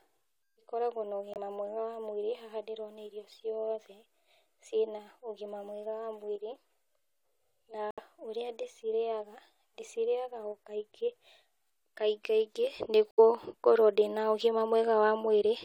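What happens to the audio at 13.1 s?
At 13.11 s the speech drops into a corrupt frame muted gap lasting until 13.20 s, about 88 ms, which fits roughly three compressed frames that the decoder rejected and the player replaced with silence. The waveform goes abruptly flat and the spectrogram shows a clean vertical blank band, with timing unchanged on either side.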